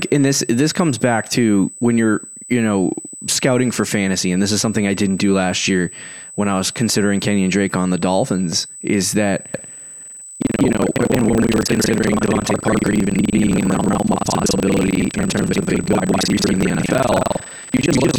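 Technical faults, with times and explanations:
Throughout: USB whine, a steady high-pitched tone at 8 kHz sitting about 20 dB below the speech. It matches the 125-microsecond USB microframe rate leaking in through power or ground. Unlike mains hum, its pitch is high and fixed rather than low.
9.52 to 18.18 s: buffer tearing, a continuous robotic buzz at 21.5 Hz, which fits a 2048-sample buffer. Writer and reader have slipped, so roughly half of each buffer replays audio from about 200 ms earlier. Unlike random dropouts, it repeats every period and follows the signal.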